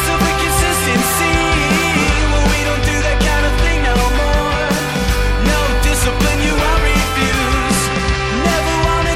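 No dropouts, clicks, distortion or timing errors are audible at any point in the recording.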